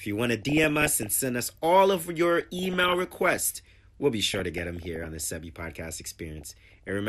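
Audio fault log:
Throughout: MP2 compression. The speech sounds steadily dull and plainly gurgling, with a granular roughness on the voice. The likely cause is MPEG Layer II coding at a low rate, which fits around 80 kbps. Too few bits force the upper sub-bands off and leave the rest coarsely quantised. Unlike the burbling below, this coloration never comes and goes with any error burst. It is present across the whole clip, a loss of top end and fine detail with upper bands flickering on and off.
0.32–1.16 s, 2.39–3.37 s, 4.27–5.26 s, 6.38–6.89 s: DAB burbling. In each of these four stretches the speech is broken up by burbling noise over the programme. Bit errors at a fraction of a percent slipped past error correction into the MP2 data. Corrupted samples put short blips of noise in single sub-bands, and corrupted scale factors, where they get through, make sub-bands jump in level for up to a frame, across dozens of frames per burst. 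Plain MP2 dullness is steady, while this arrives in distinct episodes with abrupt blips of noise.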